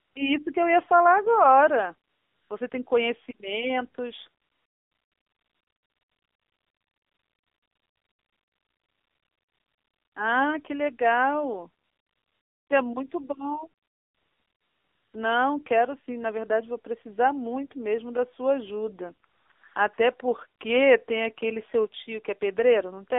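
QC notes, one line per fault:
Throughout: AMR narrowband mobile codec. The sound is coded at 7.4 kbps, so it comes across buzzy and synthetic, with pulse-driven vocal-tract modelling replacing natural detail. On a spectrogram it sits in a hard band from 300 Hz to 3.6 kHz, empty above and below.
0.0 to 19.98 s: AMR comfort noise. There are nine pauses filled with steady, smooth synthetic noise, lasting from 20 ms to 5.74 s. The longest runs from 4.42 to 10.16 s, and three short ones cluster between 19.28 and 19.98 s. The spectrogram shows flat, featureless noise blocks with abrupt edges, and the waveform shows a constant low level.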